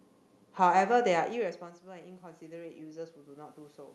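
Speech that drops in level around a second in, as the talker moves away from the microphone, then from 1.59 to 3.09 s the voice and the room noise behind it swell together by about 3 dB. That slow joint rise is automatic gain rising: the gain control, finding the input about 16 dB quieter, gradually turned itself up. The audio also carries the coding character of a call path, with content above about 12 kHz absent.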